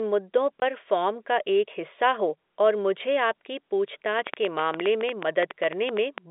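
Packet loss filled with silence occurs at 0.60 to 0.62 s, just before "फ़ॉर्म का": a 20 ms hole, the length of one packet, where the receiver played silence, with hard edges.

A train of clicks runs from 4.19 to 6.19 s, around twenty irregular pops at about 8.6 per second and roughly 15 dB above the speech, likely from electrical interference or a faulty connection.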